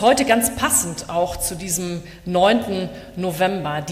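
No technical faults can be heard anywhere in the audio, and the signal stays steady and intact throughout.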